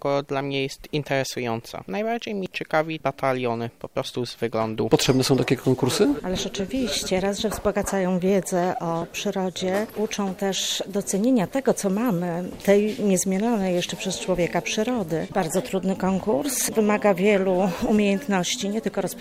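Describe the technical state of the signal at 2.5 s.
Right at 2.46 s there's a dropped buffer (overrun): the sound jumps ahead, no gap. The likely cause is the software missing its read before the hardware overwrote the buffer, so roughly 20 ms of audio vanished and the edges got butted together.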